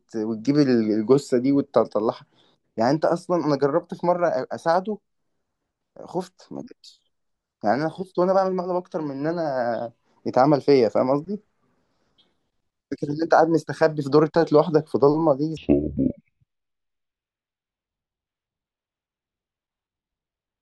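From 15.57 s to the end, you get a classic stereo read as mono: the left and right samples are being played back one after another as a single channel, so the speech drags at half speed, drops a full octave, and picks up a faint mirrored image up top.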